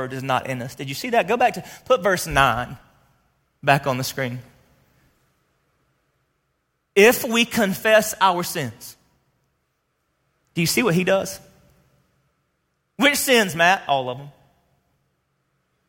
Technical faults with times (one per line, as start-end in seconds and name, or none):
none